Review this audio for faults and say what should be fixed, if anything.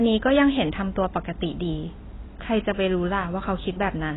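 Throughout the speech, nothing is present above 3.9 kHz, so it sounds dull, with smeared, warbling sibilants and heavy damage. The likely cause is AAC compression at a very low bitrate, around 16 kbps, discarding the highs. A spectrogram shows a flat ceiling at 3.9 kHz. Encode at a higher bitrate, or keep an uncompressed master for processing.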